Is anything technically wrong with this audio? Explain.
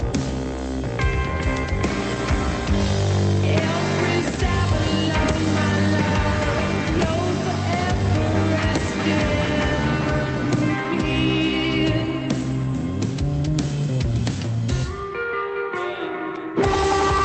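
No, no technical faults here.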